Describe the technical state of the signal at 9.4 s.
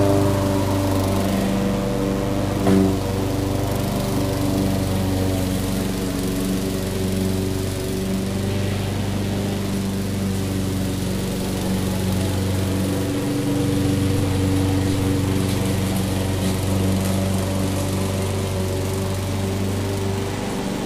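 At 9.4 s there is a steady, thin buzz at 100 Hz with a string of harmonics above it, sitting roughly 25 dB under the sound. This is DECT cordless phone buzz, and it runs through the whole clip rather than just this moment. A nearby DECT handset or base transmits a brief radio burst every 10 ms; the audio circuitry rectifies that burst, turning the 100 Hz pulse train into audible buzz.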